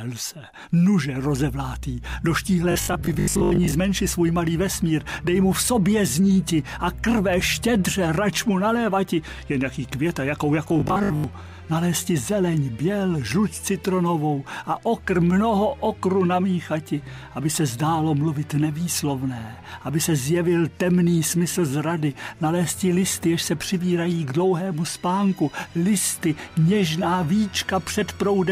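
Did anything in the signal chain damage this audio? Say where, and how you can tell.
Yes. Robotic sound from repeated short buffers occurs at 2.72–3.74 s and 10.68–11.24 s: a rigid 50 Hz metallic buzz, matching a 20 ms block replayed over roughly half the material. The likely cause is a starved driver or buffer stage. Codec warbling would wander in pitch, but this buzz stays fixed.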